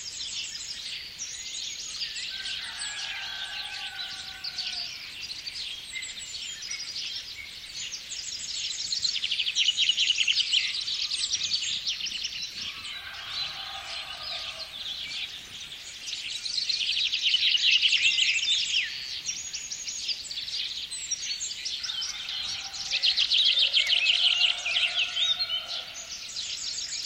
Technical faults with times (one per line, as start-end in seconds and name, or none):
none